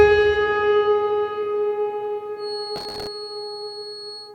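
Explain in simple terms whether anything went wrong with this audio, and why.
Two things go wrong, and they overlap near the end.

From 2.35 s to the end of the clip, a thin, steady tone at about 4.3 kHz sits behind the sound, well below it in level and swelling and fading slowly. This is a feedback whistle. It is most likely caused by a loudspeaker feeding back into the microphone, with the loop held right at the edge of feedback, so one high pitch keeps ringing without growing into a howl.

From 2.76 s to 3.07 s, a short burst of gritty crackle rides on top of the sound. This is processor overload crackle. The processor falls behind and misses dozens of deadlines again and again, each for a tiny chunk of audio only a millisecond or two long. Each time, it repeats a scrap of old audio instead of the new one, and the hard edges between those scraps add up to the tearing, crackling texture.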